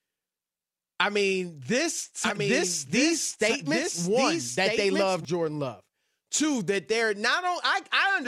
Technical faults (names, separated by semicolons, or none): doubled audio track